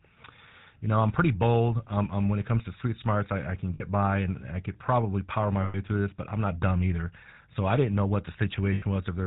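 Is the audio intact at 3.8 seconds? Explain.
No. Lost GSM frames break the audio from 3.74 to 3.83 s, between "smarts I I can" and "by and I could". The decoder repeats the last good frame's settings, so instead of a silent gap or a clean repeat there is a rough, metallic ring. Its length fits about 60 ms of missing frames.

The GSM full-rate codec is also audible throughout this moment. It rebuilds the vocal tract from a sparse, regularly pulsed excitation at 13 kbps and passes nothing above 4 kHz. The result is a steady buzzy, gravelly roughness that is always present, unlike the brief ring.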